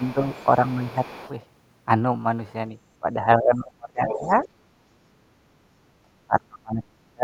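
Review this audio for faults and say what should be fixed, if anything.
The speech drops in level four times: slightly, by about 5 dB, at 0.00–0.36 s and 0.67–0.85 s, then heavily, by about 30 dB across roughly a second within 3.0–4.3 s, and by about 35 dB over much of 6.02 s to the end. This is speech suppressed in double talk, likely because the echo canceller, with both sides talking, could not separate the near talker from loudspeaker echo and turned everything down. A double-talk detector that holds adaptation instead of clamping the microphone would prevent this.

A second, fainter voice runs under the speech at 0.0–1.3 s, about 25 dB below it, and returns much louder at 4.07–4.48 s, only about 10 dB down. This is the other side's voice leaking through, likely residual loudspeaker echo the canceller failed to remove. Unlike room reverberation, it is a separate voice with its own timing, not a smeared tail of the talker. 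Longer echo-tail modelling and a stronger residual suppressor would remove it.

From 4.59 to 5.16 s the room tone falls by about 15 dB for a little under half a second, then comes back. This is background gated by the echo canceller, which clamped the microphone hard while the loudspeaker played. It differs from an ordinary noise gate because it follows far-end playback rather than the talker's pauses. Inserting comfort noise during suppression would keep the background steady.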